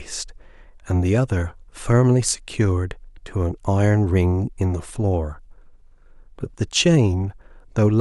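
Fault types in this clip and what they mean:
No fault types are present in this clip.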